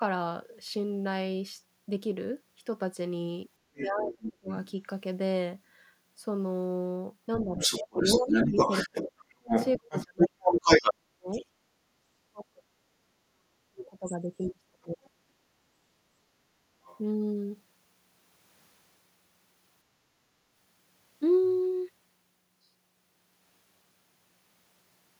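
An echo canceller that likely failed to cope with both sides talking at once causes two related faults in this speech. From 3.74 to 4.71 s the other side's voice leaks through. Loudspeaker playback reaches the microphone and is not fully cancelled, so a second voice sits about 5 dB under the talker. Inside that window, from 3.83 to 4.49 s, speech is suppressed in double talk. Unable to tell the talker from the echo, the canceller pulls everything down, and the talker's voice sinks by as much as about 30 dB for roughly 0.7 s.

The same double-talk suppression, likely from the same confusion, runs from 7.37 to 11.29 s. The talker drops by up to about 40 dB across roughly 3 s in total. Overlapping it, from 7.58 to 11.46 s, the other side's voice leaking through is louder than the talker, about 5 dB above.

Suppression in double talk returns from 12.18 to 15.14 s, again likely caused by the canceller. 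The voice is turned down for about 2 s in all, with dips near 40 dB.

A last brief scrap of the other side's voice leaks through from 16.83 to 16.98 s, likely left over from incomplete cancellation. It is faint, about 25 dB below the speech.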